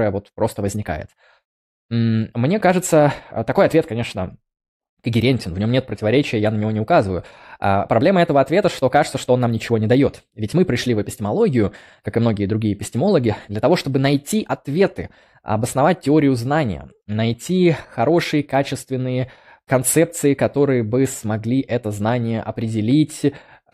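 Nothing stands out as a technical fault anywhere in this speech recording.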